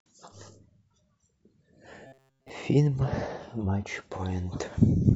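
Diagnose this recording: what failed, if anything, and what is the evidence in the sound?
Between 2.07 and 2.50 s the speech turns into robotic sound from repeated short buffers. It is a rigid, metallic buzz at 134 Hz, built wholly from repeats. The likely cause is a starved buffer replaying one 7.5 ms slice while audio is skipped.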